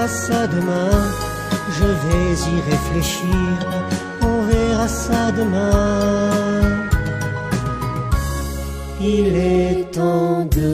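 At 3.61 s, frames out of order garble the sound until 3.82 s. Two neighbouring blocks of about 93 ms each were decoded in swapped order, so the stretch plays with its halves exchanged. It comes across as a brief flutter. No time is lost.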